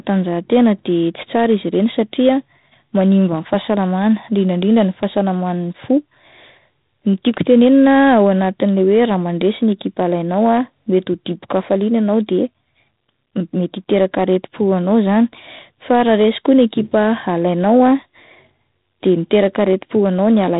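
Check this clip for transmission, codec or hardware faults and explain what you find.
One codec fault runs through the whole speech clip: G.726 ADPCM damage. From start to finish the audio stops at about 3.8 kHz, and a harsh, rasping hiss rides on every syllable, rising and falling with the speech level. That coarseness fits 24 kbit/s ADPCM, where each sample is coded as a few bits of difference from a running prediction. Unlike steady background hiss, this noise drops away when the speech does.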